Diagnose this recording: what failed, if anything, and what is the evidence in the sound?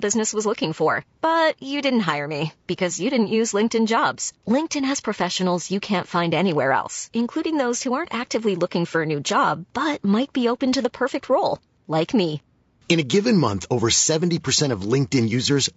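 Throughout the speech, a rough, grainy texture is plainly audible, likely from low-delay AAC compression at the codec stage, consistent with AAC-ELD near 32 kbps. Its short frames blur pitch harmonics, so a spectrogram shows noise between them and a thin, synthetic-looking top band.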